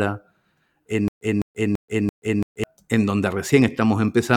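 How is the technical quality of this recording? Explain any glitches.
The recording has one glitch.

From 1.08 to 2.64 s there is a stutter with silent gaps. Playback likely stalled and replayed its last fragment at each retry. A 206 ms burst of speech repeats four times, every 336 ms, with 131 ms of dead silence between. The missing speech is lost before "en donde".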